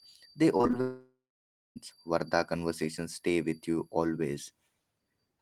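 From 0.57 to 0.75 s there is repeated packet loss, giving a robotic sound. Short gaps follow one another closely, the longest about 21 ms. Each is patched by stretching the previous sound. About 74 ms is synthetic, roughly 43% of the span. The result is choppy, with pieces missing.

From 0.81 to 1.78 s the audio breaks off, likely from a long network dropout. The last sound is carried on as a fading buzz. Then about 610 ms of silence follows. Nearly a second of the original is missing when the sound returns.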